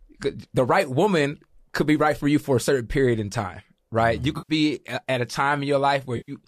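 At 4.38 s the speech smears into a brief noisy, phasey patch lasting about 110 ms, clearing just before "at a", and the same blur returns from 6.17 to 6.32 s. Both are AAC frame loss with concealment: a run of compressed frames went missing, a gap that fits roughly eleven short low-delay frames, and the decoder patched it from the last good spectrum with randomised detail. The slight underlying roughness is likely light AAC-ELD coding.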